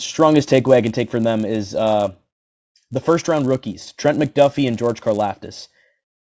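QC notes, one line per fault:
Throughout: resampler restarted on every block. The 48 kHz to 16 kHz conversion was run afresh on each 10 ms block, leaving a small error at every edge that fuses into a 100 Hz buzz. Unlike mains hum, it vanishes in the pauses between speech.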